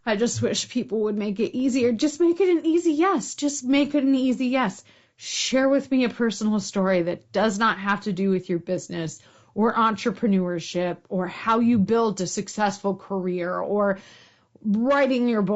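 Speech runs through the whole clip with plainly audible low-delay AAC compression: the voice sounds rough and grainy, with a hiss filling the gaps between harmonics and a thin, synthetic top band. Unlike ordinary low-bitrate AAC, which smears transients with pre-echo, this grain comes as short frames blur pitch harmonics. It likely comes from AAC-ELD, the low-delay codec used in video calls, and fits about 32 kbps.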